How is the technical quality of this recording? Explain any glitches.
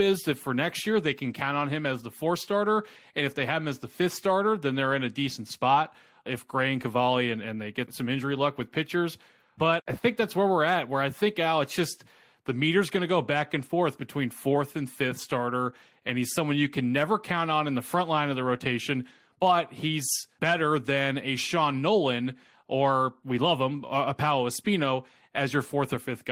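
No technical faults or glitches can be heard anywhere here.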